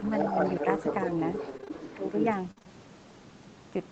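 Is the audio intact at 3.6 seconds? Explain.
Yes, the speech at 3.6 seconds is intact, with no fault at that moment.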